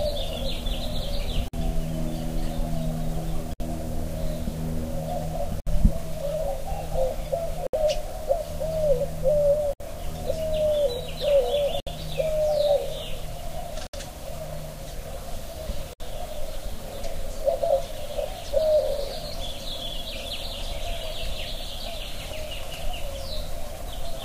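Gaps at joins of encoded pieces open at 1.48, 3.53, 5.60, 7.67, 9.73, 11.80, 13.87 and 15.93 s in this audio. The first lasts 52 ms and the rest 67 ms each. The sound was encoded in roughly 2-second pieces and joined untrimmed. Each piece keeps its encoder's start-up delay and end-of-frame padding, so a short silence with smeared edges breaks the flow before the sound resumes where it stopped.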